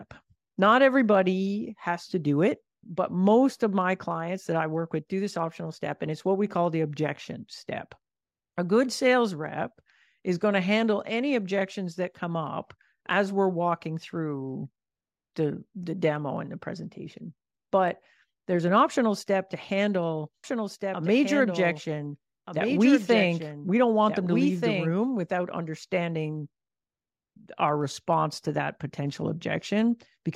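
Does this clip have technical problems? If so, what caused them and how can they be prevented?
Yes, there are two faults.

A block size mismatch (truncated) runs through the whole speech clip as a steady buzz at 46.9 Hz. One processing stage writes blocks longer than the next stage reads, so the tail of every block is discarded and each cut repeats at the block rate. The buzz rate fits a 1024-sample write block at 48 kHz. The discarded portion is small, so timing and pitch stay essentially normal. To prevent it, configure every stage in the chain to use the same block size, or put a buffer between stages so no samples are dropped.

A doubled audio track appears from 20.44 s to 24.93 s, starting just after "optional step to handle" and ending just before "without understanding". A second full-band copy trails the original by roughly one and a half seconds at about 5 dB lower. It has no decay or room colour, and it begins and ends abruptly. 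The likely cause is the same signal being captured again through a slower path, or an edit that left two offset copies on the timeline. To prevent it, route each source to the mix only once and check edits for duplicated regions before export.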